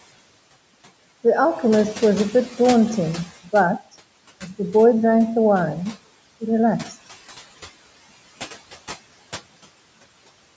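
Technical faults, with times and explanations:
Throughout, noise suppressor artifacts: the call's suppressor estimates which frequency bands hold steady background noise and lowers them frame by frame, here by about 17 dB. The room noise, which sits about 19 dB below the speech, therefore sinks away in the gaps between words and comes back up underneath them whenever speech fills those bands, so the background pumps in step with the talking. The band-limited sound, with nothing above 8 kHz, is the normal call microphone processing.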